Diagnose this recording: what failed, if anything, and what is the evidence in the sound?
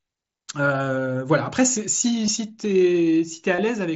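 The failure is in the wireless link between headset and phone: concealed Bluetooth headset packet loss over mSBC. At 2.26 s there is a brief gap, about 15 ms, and from 3.56 to 3.58 s a slightly longer one, about 22.5 ms, consistent with two and then three lost frames. The receiver filled each hole by repeating the best-matching recent stretch of waveform, so the speech carries on at full level with a buzzy tone and a small warble where real audio resumes.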